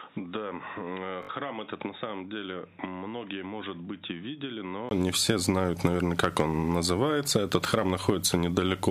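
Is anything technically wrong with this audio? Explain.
Yes, two things. From the start to about 4.91 s the sound is dull and boxy, with nothing above 3.8 kHz, roughly 10 dB quieter, and sitting on a hiss maybe 35 dB down. Then there's a brief gap of about 20 ms and it opens up clearly. That's most likely an input switched to a poorer device, such as a headset's call profile. The narrower band, lower level and extra noise all come from that device.

Inside that stretch, from 1.23 to 1.29 s, there's a Bluetooth stutter. For about 61 ms the same tiny slice keeps replaying as a short buzzy rattle, then the sound jumps ahead as if it had kept going. Packets arrived late or got lost, so the receiver looped its last buffer until fresh data showed up. A gap that long fits roughly three lost packets.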